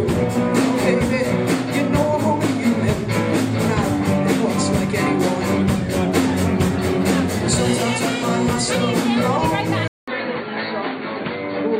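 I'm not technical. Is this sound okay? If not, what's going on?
No. At about 9.88 s there's a short gap of about 0.2 s, then the sound turns duller, muffled and slightly quieter through to the end. That's an input switched to a poorer device, likely another microphone that cuts everything above 4.5 kHz.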